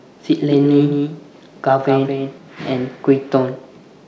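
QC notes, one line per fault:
0.50–2.38 s doubled audio track: a full-band copy trails around 200 ms behind, a few dB quieter, switching abruptly on and off, likely from a second, slower capture path.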